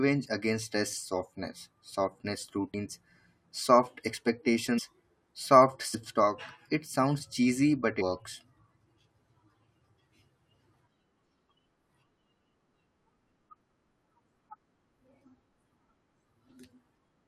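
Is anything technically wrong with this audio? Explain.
Yes. The speech has compressed frames skipped at 0.92, 2.73, 4.77, 5.93, 8.00 and 12.60 s. Whole blocks of coded audio never play, so the sound jumps forward. Most skips are short, under a quarter second. The one at 12.60 s loses about half a second. The jump sizes fit a frame length near 23 ms. At each join the speech jumps ahead abruptly.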